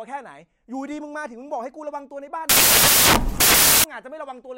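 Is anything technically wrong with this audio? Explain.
Yes. From 2.49 to 3.84 s, samples are built from the wrong bytes. Misassembled bytes promote fast-changing low bits, so the speech becomes loud, harsh noise, close to white on the louder passages.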